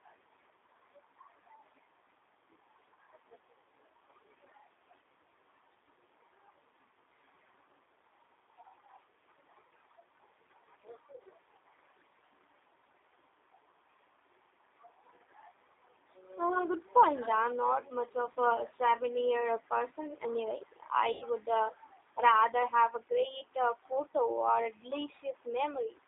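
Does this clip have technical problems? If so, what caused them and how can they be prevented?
Yes. The call ran through the G.729 codec at 8 kbit/s. The codec models speech with a vocal tract filter, a pitch predictor and a few pulses per frame, and the line passes only about 300 Hz to 3.7 kHz. The result is clearly rough, synthetic-sounding speech with no high-frequency detail. A wideband codec such as G.722 or Opus, negotiated end to end, would prevent this.

The second fault is VoIP packet loss concealed by the speech codec, at 18.33–18.39 s and 21.12–21.24 s. About 30 ms and then 90 ms of audio went missing, which fits one lost packet and then three. The decoder filled each gap by extending its last pitch and filter settings while fading the gain. This smears the sound into a buzzy tone or coloured noise that decays, and the speech stays weak for a short while after each gap. A network with less loss, with jitter buffering and QoS priority for voice traffic, would prevent this.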